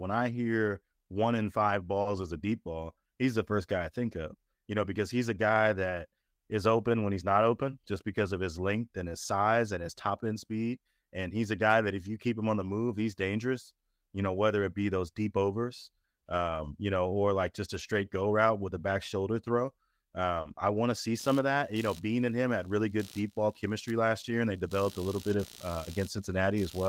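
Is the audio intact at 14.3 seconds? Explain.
Yes, at 14.3 seconds the speech plays through cleanly, with no fault to be heard at that moment.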